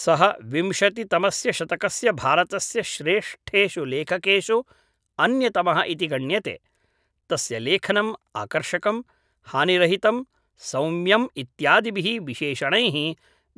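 A speech recording, with nothing technically wrong with it at any time.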